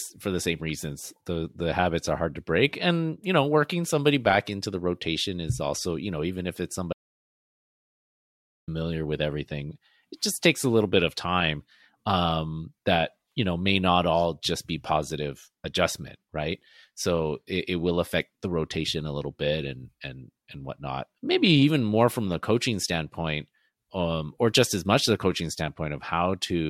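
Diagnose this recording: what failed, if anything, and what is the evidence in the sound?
The input feed to the recorder most likely dropped out, through a lost device connection, a failed link or a momentary mute, while the capture chain kept writing silence. The result is an audio dropout to silence from 6.93 s to 8.68 s, about 1.75 s long. The speech cuts off mid-flow after "know even if it's" and resumes abruptly at "with everything it just". The gap is silent with no room tone, and whatever was said in between is lost.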